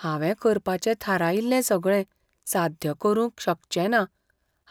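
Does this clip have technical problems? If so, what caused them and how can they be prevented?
No, this clip has no technical problems, so there is nothing to trace to a cause or prevent.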